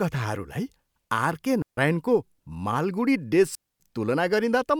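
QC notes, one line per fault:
1.62–1.77 s and 3.55–3.80 s, digital wireless dropout: the wireless link lost too much data, so the receiver muted for about 153 ms and then about 249 ms. Each mute fades very quickly, leaving a clean hole of near silence with no noise burst on either side.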